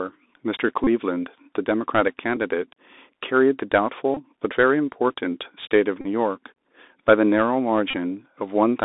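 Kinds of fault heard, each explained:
Bluetooth CVSD headset codec: The one-bit delta coding squeezes the speech into a narrow line, from about 250 Hz up to 3.7 kHz. A granular hiss sits under it and s sounds turn scratchy, which sets it apart from clean band-limiting, where no hiss or grit appears.
Bluetooth headset packet repeated: Five brief buzzes, lasting about 8 to 34 ms, appear where lost headset packets were filled by replaying the last one. The 3.75 ms repeat gives a steady tone near 267 Hz. A plain dropout would leave a silent gap instead of a buzz.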